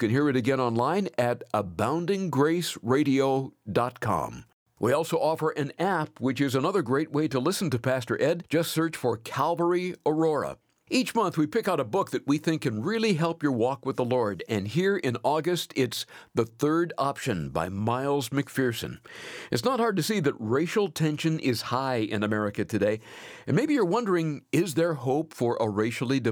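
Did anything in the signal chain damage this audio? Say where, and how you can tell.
No, nothing along the chain from capture to playback has left an audible mark on this speech recording, and the signal holds steady with no disturbance at any point.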